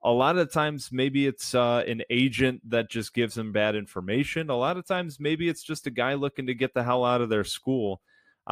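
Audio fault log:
No faults are heard in this speech clip. Nothing here calls for an entry in the log.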